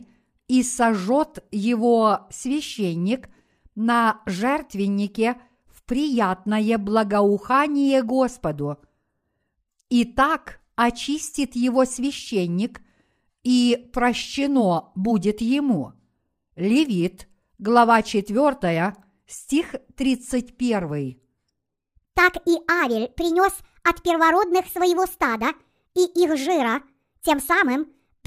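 From 21.69 s to the end, the speech turns suddenly hurried and high, running 1.39 times too fast and raised by about five semitones. This section at the wrong speed was likely played back against the wrong clock, shifting tempo and pitch together.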